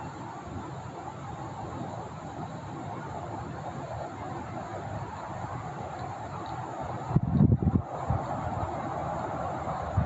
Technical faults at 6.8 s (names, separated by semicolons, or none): gain pumping